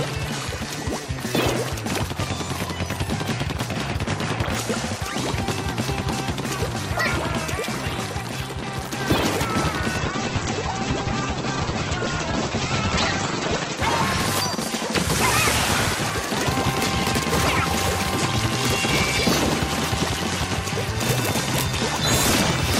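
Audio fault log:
9.99–13.85 s, call bitrate drop: the encoder got squeezed from 96 to 10 kbps, so everything goes coarse and muffled, with the top end cut from 20 kHz to 8 kHz.
21.03–21.74 s, cable scratch noise: a burst of uneven scratchy rustling sits roughly 10 dB under the sound, likely a worn cable or connector being moved.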